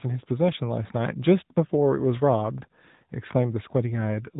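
AMR narrowband mobile codec damage runs throughout: the speech is band-limited to about 3.8 kHz and rebuilt from a coarse vocal-tract model, sounding buzzy and synthetic, consistent with roughly 10 kbps.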